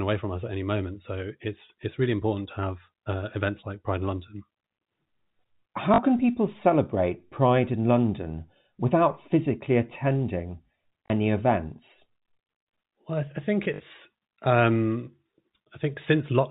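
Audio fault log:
5.94–5.98 s, 11.06–11.10 s and 13.64–13.80 s, packet loss with last packet repeated: the first two gaps are each 40 ms, and the third spreads 80 ms of loss over 160 ms, with the longest run at 60 ms. The repeated blocks suggest 20 ms packets. The replays seldom restart in step with the pitch, and the runs buzz at about 50 Hz. In the waveform, identical 20 ms segments repeat. On the spectrogram, a 50 Hz harmonic comb shows, all within the G.711 band that stops at 4 kHz.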